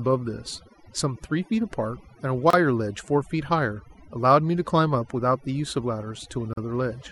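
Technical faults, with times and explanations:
Throughout, overdone noise removal: bands near the noise estimate are pulled down hard, taking quiet speech detail too, leaving speech over twinkling near-silence.
2.50 s and 6.53 s, gap at a join of encoded pieces: 29 ms and 40 ms silences, 4 s apart, from untrimmed encoder delay and padding; speech then resumes where it stopped.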